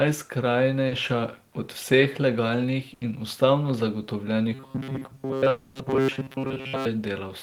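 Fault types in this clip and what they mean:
Short concealed packet loss: around 0.87 s, about 40 ms of audio went missing and the receiver papered over it by extending the previous sound, leaving a brief smear.
Burst of packet loss: at about 2.93 s, roughly 80 ms dropped out together, so the last sound is held and fades before the audio picks up past the gap.
Robotic sound from repeated short buffers: from 4.54 to 6.86 s the sound turns into a stiff metallic buzz at 134 Hz, likely from most of it being tiny repeated chunks, which fits buffers of about 7.5 ms.
Long network dropout: from 5.49 to 5.77 s around 260 ms is replaced by a fading continuation of the prior sound, likely a network stall, then audio resumes without the lost stretch.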